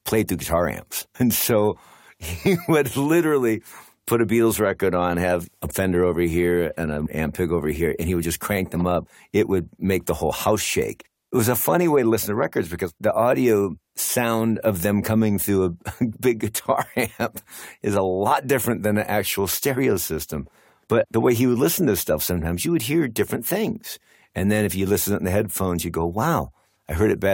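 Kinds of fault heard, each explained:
No technical faults detected on listening; nothing to list.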